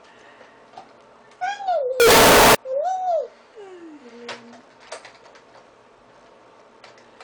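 From 2.00 to 2.55 s the audio turns into loud, harsh distortion, with quiet moments as loud as the rest. The likely cause is signed and unsigned mixed up: flipping the top bit of samples that fit 16-bit data makes each zero crossing jump across the full range.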